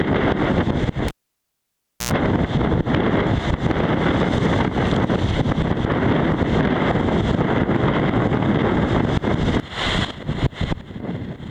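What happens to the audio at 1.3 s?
At 1.3 s the signal is gone: this falls inside a cable pulled and plugged in event spanning 1.08 to 2.11 s. A pop at 1.08 s marks the live lead being withdrawn, followed by roughly 0.98 s of near silence with the connection broken. As the plug goes back in, the tip touches first and picks up a brief 60 Hz mains buzz lasting about 86 ms, then a second pop as the audio returns at 2.11 s.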